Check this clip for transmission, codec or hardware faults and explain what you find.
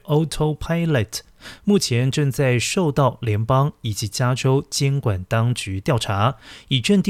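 Nothing amiss turns up anywhere in this speech recording, so there's no fault here to report.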